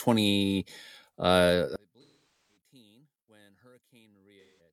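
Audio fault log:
1.76–4.73 s, one channel inverted: from here to the end, the speech in mono drops by about 37 dB, leaving only a faint remnant. The likely cause is reversed polarity on one stereo channel, so shared centre content cancels when summed and only the small inter-channel difference survives.
2.02–2.56 s and 4.41–4.60 s, AAC frame loss with concealment: the sound turns into smeared, noisy, phasey patches, about 470 ms long and then about 170 ms long. Coded frames went missing, and the decoder filled each gap from the last good spectrum with scrambled signs or interpolated energy instead of true signal.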